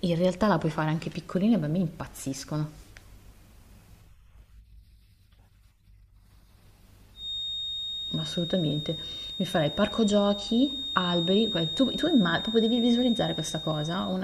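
From 7.13 s to the end, a feedback whistle sits behind the speech: a thin 3.7 kHz tone roughly 10 dB below it, likely from a loudspeaker-to-microphone loop held just short of runaway. Unlike a howl, it never builds. It only swells and fades slowly in level.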